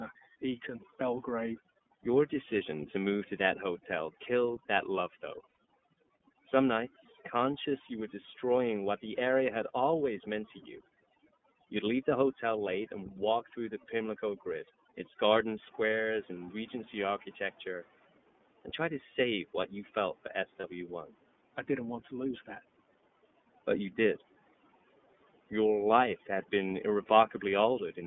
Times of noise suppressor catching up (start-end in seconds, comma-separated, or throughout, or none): 15.61-17.88